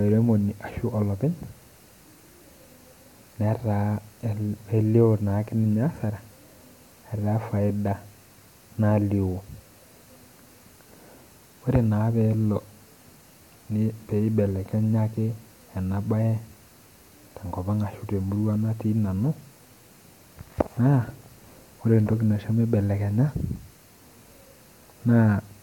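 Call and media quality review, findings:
No findings from the call and media quality review: no faults heard in this speech recording.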